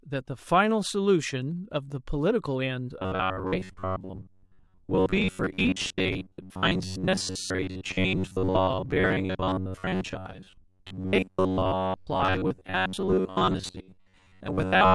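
From 2.99 s to the end, the speech turns into a rigid metallic buzz at 93.8 Hz, the robotic sound from repeated short buffers. Most of the signal is a roughly 10.7 ms fragment being replayed, likely because new audio arrived too seldom.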